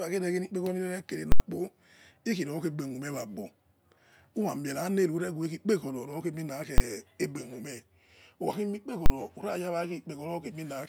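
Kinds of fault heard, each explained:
Invalid numbers at full scale: three very loud bangs break into the speech at 1.32, 6.78 and 9.06 s, lasting 80, 20 and 40 ms. A calculation returned infinite or invalid values, which were forced to the maximum level and held there for each block.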